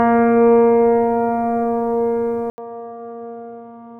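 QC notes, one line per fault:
2.5 s to the end, input switched to a poorer device: after a gap of 80 ms the sound returns dull and boxy, with nothing above 3.8 kHz, roughly 10 dB quieter, and carrying a faint new background noise about 50 dB below the signal. The likely cause is the recording input jumping mid-take to another microphone or a headset's call profile, whose narrow band, lower gain and own noise floor replace the original pickup.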